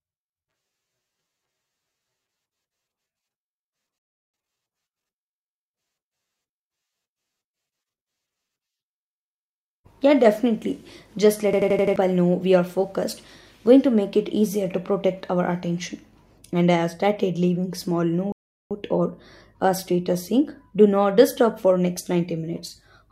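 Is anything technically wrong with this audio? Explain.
Yes. The speech has two rebuffering stalls and one system hang loop.

Rebuffering stalls at 3.98–4.34 s and 18.32–18.71 s: the player ran out of downloaded audio and paused until more arrived. Each sounds like a cut to silence, after which the speech resumes exactly where it stopped, adding about 0.35 s and 0.39 s. The second falls after "have started leaving small" and picks up at "or a status saying."

System hang loop at 11.53–11.96 s: the system froze while the audio hardware kept replaying its ring buffer. An 85 ms fragment repeats five times at 11.7 Hz, a machine-gun stutter that fits a 4096-sample buffer. Roughly 0.4 s of speech is lost.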